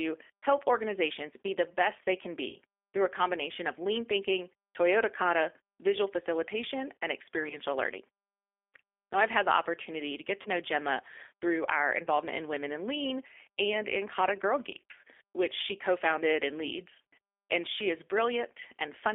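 Throughout, the speech carries G.729 codec damage: an 8 kbit/s model-based coding confined to a 300 to 3500 Hz line band, sounding rough and synthetic rather than merely muffled like a plain band limit.

VoIP packet loss concealed by the speech codec then strikes four times: 2.49 to 2.56 s (about 40 ms lost), 7.43 to 7.58 s after "kata visual facilitation and" (20 ms scattered across 80 ms), 10.42 to 10.49 s after "the opportunity to get" (30 ms), and 12.05 to 12.08 s after "through our" (20 ms). Each time, the decoder stretches its last pitch and filter into a buzzy tone or coloured noise that fades, instead of falling silent as a hard dropout would, and the speech stays weak or distorted for tens of milliseconds or more afterwards.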